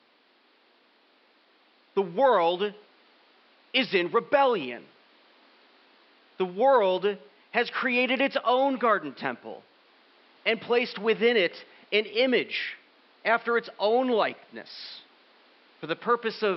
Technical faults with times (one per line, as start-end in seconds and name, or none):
none